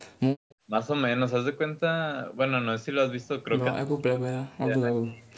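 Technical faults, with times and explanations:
0.36 to 0.57 s, background gated by the echo canceller: while the far end's loudspeaker played, the canceller clamped the microphone, so the room sound drops by about 30 dB for roughly 150 ms in total, then returns. Unlike double-talk suppression, it is the background, not the talker, that vanishes.
0.49 to 0.55 s, echo leak: a faint delayed copy of the far-end sound, about 145 ms behind and roughly 35 dB below the speech, slips through, likely because the canceller left part of the loudspeaker pickup unremoved. A separate lagging copy, rather than a dip, distinguishes it from gating.
3.7 to 5.38 s, speech suppressed in double talk: with both sides talking, the talker's speech dips and breaks up by up to roughly 40 dB across about 1.5 s in total, likely because the canceller could not tell the talker from the loudspeaker echo and turned both down. 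Here the voice itself is cut.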